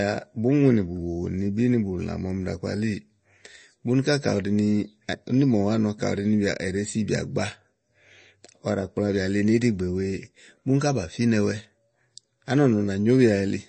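From start to finish the speech has nothing above 8.3 kHz, so s sounds go dull, and there's a plainly audible watery swirl. That's likely MP3 compression, with the encoder starved of bits in a way that fits something around 32 kbps.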